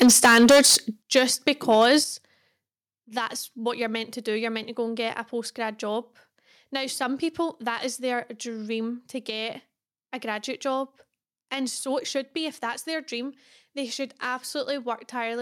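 From 0.01 to 0.76 s the speech sounds harsh and crackly. This is microphone overload. The input gain was likely set too high. Peaks run about 13 dB past the converter's limit, and roughly a fifth of the samples have their tops sliced flat. At 0.03 s the level drops by about 2 dB. At 1.02 s it falls again, by about 9 dB. These are microphone volume step-downs, likely the call software cutting the input gain. Speech and background drop together. The overload returns at 1.16 to 1.21 s, about 4 dB over. It comes back once more at 1.47 to 1.96 s, about 3 dB over. At 2.04 s the level steps down by about 8 dB.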